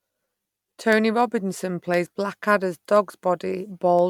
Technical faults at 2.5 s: periodic USB or driver dropouts

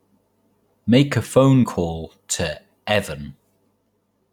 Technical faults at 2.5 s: none

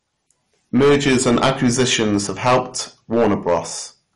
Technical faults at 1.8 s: hard clipping; MP2 compression

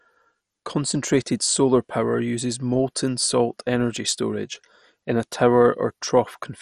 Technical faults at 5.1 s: MP2 compression

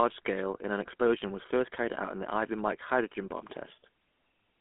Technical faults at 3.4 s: GSM full-rate codec

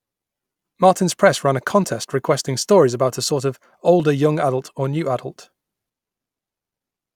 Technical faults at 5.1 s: clock drift buffer slips

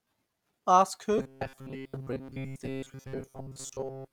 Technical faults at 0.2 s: none

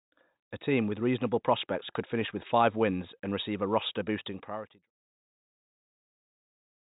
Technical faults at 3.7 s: none

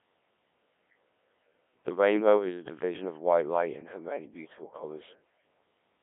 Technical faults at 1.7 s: Codec 2 vocoder

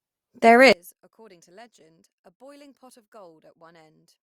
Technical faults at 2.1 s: one channel inverted

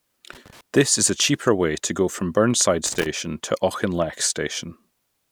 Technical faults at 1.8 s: none

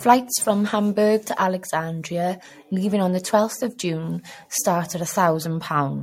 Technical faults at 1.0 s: generation loss

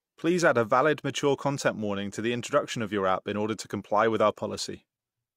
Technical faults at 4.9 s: AAC frame loss with muting

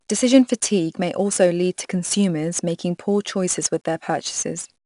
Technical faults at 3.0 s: 4-bit ADPCM compression

